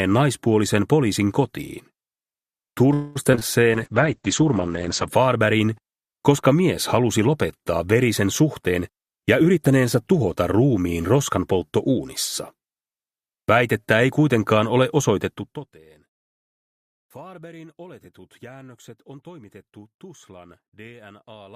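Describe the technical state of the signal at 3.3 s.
At 3.3 s the stream is losing packets repeatedly, the fault known as repeated packet loss (robotic sound), across 3.23 to 3.43 s. Four separate gaps hit that 0.2 s stretch, the longest 22 ms, and the decoder patches each by extending the sound just before it, so about 39% of the span is synthetic fill. The result is a brief choppy sound with small pieces of the audio missing.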